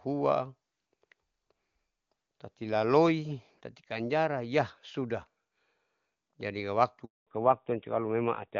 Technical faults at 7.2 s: handover gap; fallback to narrowband

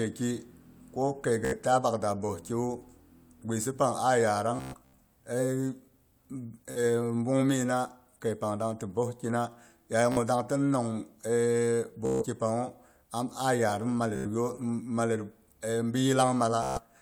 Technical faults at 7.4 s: none

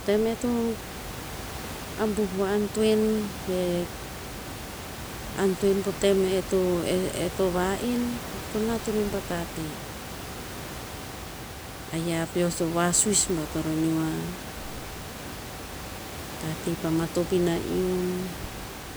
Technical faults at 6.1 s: none

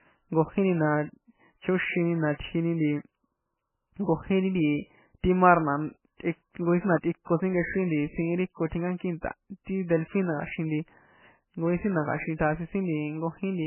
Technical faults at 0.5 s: MP3 compression

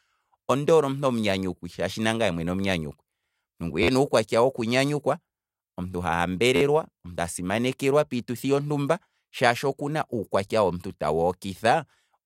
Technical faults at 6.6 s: repeated buffer

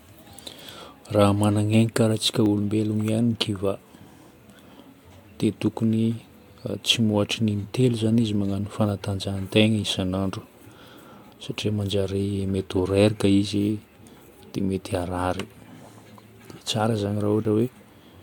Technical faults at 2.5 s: dropped buffer (overrun)

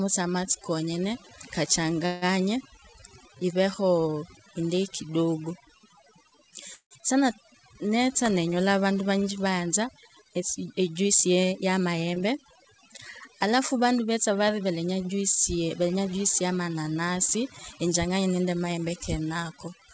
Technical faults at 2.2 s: overdone noise removal; call audio freeze

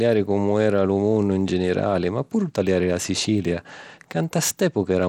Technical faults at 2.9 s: Bluetooth SBC compression

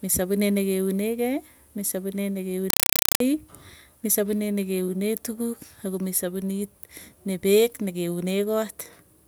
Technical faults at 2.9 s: compressed stream played as audio

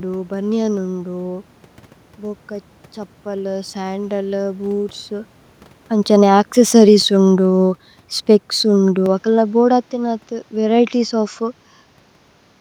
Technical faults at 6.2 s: automatic gain falling

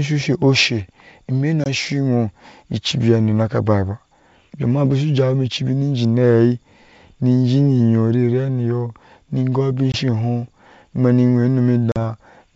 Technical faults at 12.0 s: packet loss on an ADPCM call

